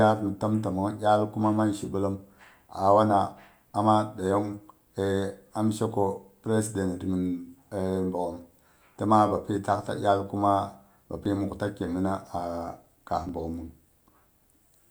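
From 11.26 to 14.31 s, periodic USB or driver dropouts skip roughly a millisecond every 1.02 s, giving regular ticks; waveform splices and thin spectrogram streaks show them.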